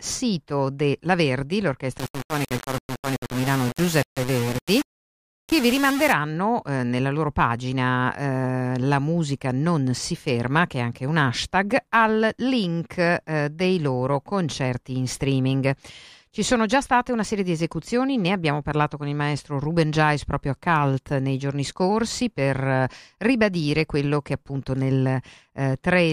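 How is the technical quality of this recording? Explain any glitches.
One clear fault in this speech recording: from 1.98 to 6.12 s, ending just before "eh nella loro pagina", the sound turns harsh and grainy, with quieter passages breaking up or sputtering. This points to a low bit depth without dither, likely about 4-bit rounding with no added dither. The error tracks the waveform, so the distortion changes with the sound and sits only about 10 dB below it.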